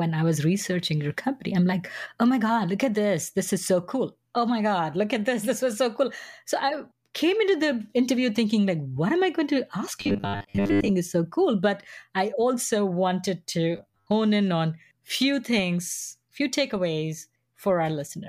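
At 10.01 to 10.91 s, after "i going to ask", and 13.77 to 14.07 s, after "i also wanted to", the speech becomes a rigid metallic buzz at 100 Hz: robotic sound from repeated short buffers, likely from a 10 ms chunk being replayed in place of most incoming audio.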